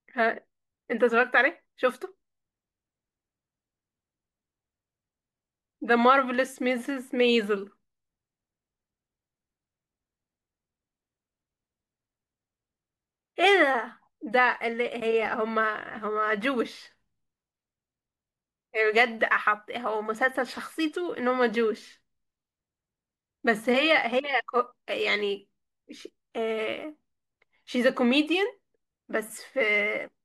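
No technical faults can be heard anywhere in the speech. There are no events to place in time order.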